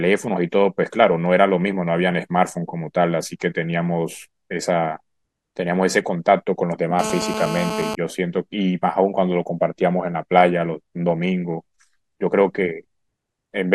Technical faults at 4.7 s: none

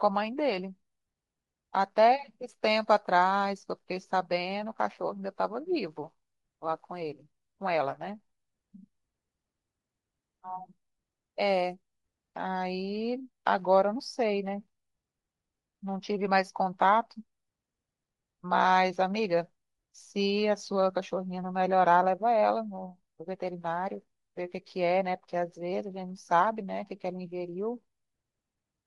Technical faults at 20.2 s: Bluetooth LC3 compression

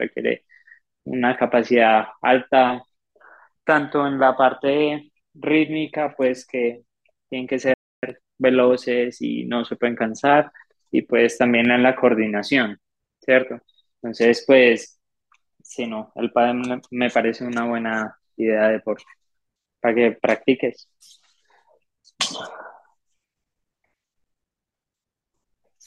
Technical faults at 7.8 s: playback stall

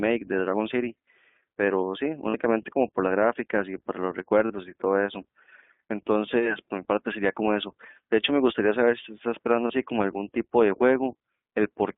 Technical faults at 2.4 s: iLBC codec; lost iLBC frames

